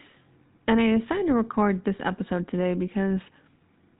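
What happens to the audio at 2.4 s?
At 2.4 s the speech carries GSM full-rate codec damage, as it does throughout. Only regularly spaced pulses drive the vocal model, so voices turn buzzy and gravelly, with nothing above 4 kHz. The roughness fits a 13 kbps stream.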